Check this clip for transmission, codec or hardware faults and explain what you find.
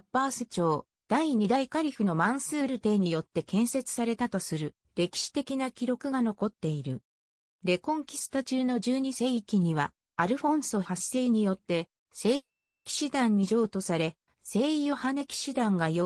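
One fault: a long network dropout from 12.35 to 12.87 s. Packets likely stopped arriving, so the receiver extended the last sound into a fading buzz, then held about 420 ms of near-silence. When audio resumes, half a second of it is gone.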